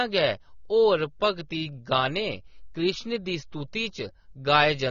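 Throughout the speech, the audio was likely squeezed through AAC compression at a low bitrate, consistent with roughly 24 kbps AAC-LC. The encoder discards everything above 6.9 kHz and coarsely quantises the rest, leaving the sound dull and smeared, with plainly audible codec damage.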